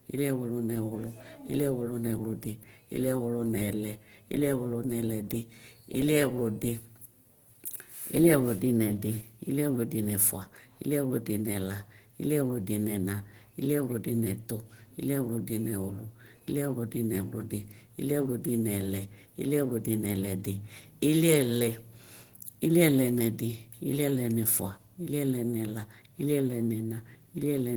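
Throughout the speech there is plainly audible codec damage: a hoarse, muffled, grainy texture. This is likely Opus compression in its hybrid speech mode at a low rate near 16 kbps. A spectrogram still reaches about 20.1 kHz, but harmonics look speckled with noise fill.

At 7.65 s a pre-echo appears. A hiss runs for about 18 ms just before a sharp attack, which sounds softened. The codec spread its block's quantisation noise backward into the quiet gap. On the waveform, a small noisy ramp precedes the onset, and a spectrogram shows a thin broadband haze ahead of it.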